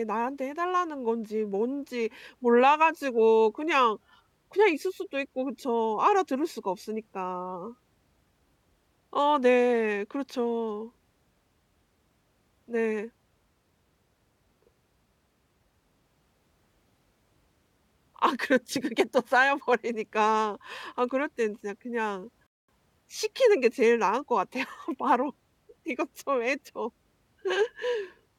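A speech recording with one playback stall: from 22.47 to 22.68 s the sound cuts out mid-flow for about 0.22 s, likely because the player's buffer ran dry. On a waveform or spectrogram this appears as an abrupt flat, empty gap between otherwise continuous speech.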